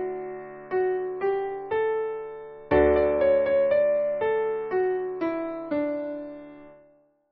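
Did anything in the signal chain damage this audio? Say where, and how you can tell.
No, I can't hear anything along the way that's hurt this one; nothing in the chain seems to have left a mark on it.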